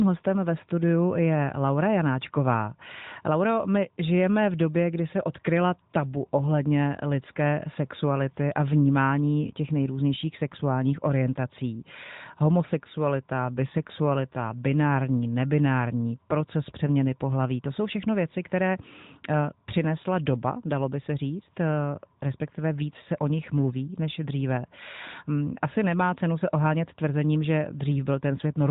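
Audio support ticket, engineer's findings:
No faults found in the speech. The AMR narrowband mobile codec path is working as expected: the audio stops at 4 kHz, and the light coding character fits AMR-NB at its top 12.2 kbps mode.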